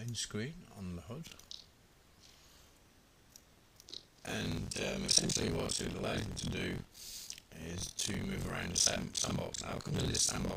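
Buffer tearing runs from 1.25 s to the end: writer and reader have slipped, so roughly 40 percent of each buffer replays audio about 50 ms old, making a 43.1 Hz buzz that fits a 1024-sample buffer.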